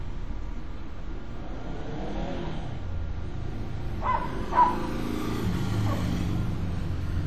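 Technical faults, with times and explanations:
throughout WMA compression: plainly audible transform-codec damage, with a ringing, washy smear and a hiss that swells and fades with the sound as quantisation noise spreads across long blocks. This is likely WMA encoding, and the damage level fits a low bitrate near 48 kbps.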